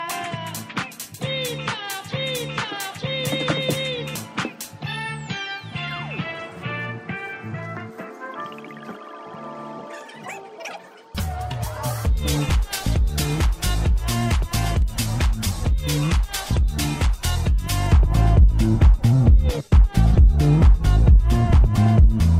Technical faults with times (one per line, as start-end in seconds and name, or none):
17.92-22.40 de-emphasis applied wrongly